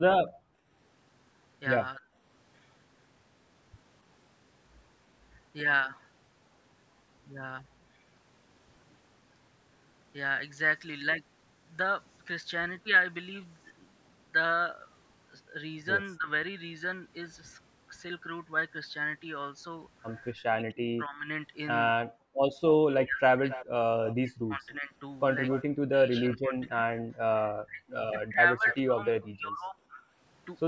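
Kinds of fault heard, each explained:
Background gated by the echo canceller: From 0.3 to 0.7 s the room sound drops by about 19 dB as the canceller turns the microphone down while the loudspeaker plays. On a spectrogram, the background noise floor goes dark for roughly 0.4 s, then returns.
Speech suppressed in double talk: Brief dips near 1.96 s and 16.2 s, then repeated cuts from 20.4 to 30.0 s totalling about five seconds and reaching about 40 dB. This is likely the echo canceller ducking the talker while both sides speak. The waveform shows sudden collapses and gaps.
Echo leak: From 22.72 to 25.63 s and 28.7 to 29.28 s, a delayed copy arrives about 273 ms after the original, roughly 15 to 20 dB below it, likely from a loudspeaker end whose canceller missed some pickup. Spectrograms show faint duplicated harmonic patterns shifted right.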